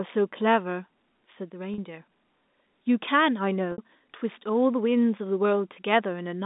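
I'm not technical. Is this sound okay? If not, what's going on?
No. At 1.74, 3.72 and 5.74 s the speech briefly holds a slightly buzzy tone. That's packet loss with pitch repetition: tiny 20 to 60 ms gaps patched by repeating the last sliver of sound.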